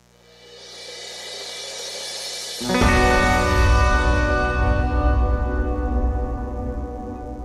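A steady, raspy mains buzz runs through the whole audio, about 35 dB below the signal. Its harmonics of 60 Hz suggest switching spikes from a dimmer, rectifier or unshielded cable.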